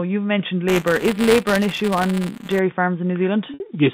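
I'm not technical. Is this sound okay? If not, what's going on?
No. From 0.68 to 2.59 s, just after "you've mentioned", there's a steady robotic buzz at about 200 Hz. This is buffer tearing: the audio hardware and software drift out of step, so a small slice of each chunk is stale sound from roughly a hundredth of a second earlier.

Around 3.54 to 3.60 s, the sound briefly holds as a buzzy note before fading. This is packet loss with pitch repetition: 60 ms of audio went missing, and the receiver filled the gap by repeating the last bit of sound.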